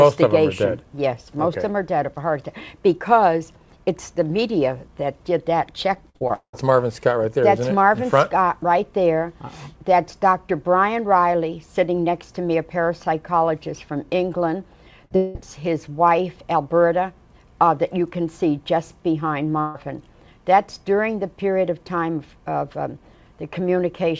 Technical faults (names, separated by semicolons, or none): repeated packet loss (robotic sound); burst of packet loss; long network dropout